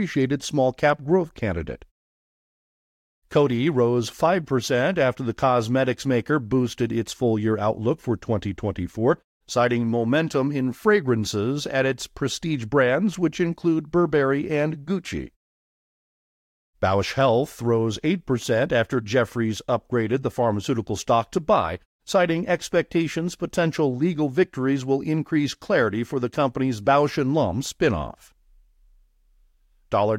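No technical faults are audible anywhere in the speech.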